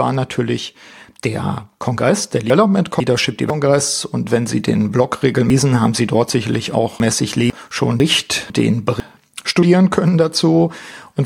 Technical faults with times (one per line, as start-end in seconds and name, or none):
2.50-3.50 chunks out of order
5.50-7.50 chunks out of order
8.00-9.00 chunks out of order
9.61 compressed frames skipped